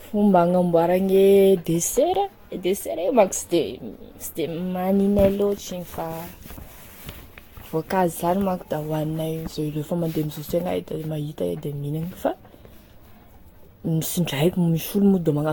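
Speech with generation loss throughout: the sound is swirly, smeared and hollow beyond what a single encode near 70 kbit/s would give, attacks are blurred, and nothing remains above 19.2 kHz, likely from around seven successive Vorbis-style lossy re-encodes compounding quantisation noise and spectral holes.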